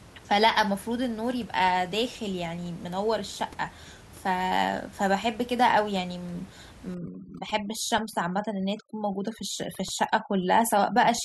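From 6.95 s to the end of the clip, overdone noise removal sets in. A noise reducer pushed too hard cuts individual frequency bands whenever they approach its noise estimate, dropping the room noise, about 22 dB below the speech, and breaking it up into twinkling specks, and taking quiet parts of the voice with it.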